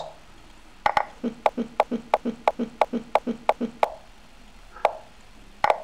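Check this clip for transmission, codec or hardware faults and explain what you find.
One fault is present. From 1.49 to 3.84 s there is a broken-record loop: a 339 ms fragment of sound repeats seven times back to back. The playback or stream likely stalled and kept resending its last buffer, so the original audio from that stretch is lost.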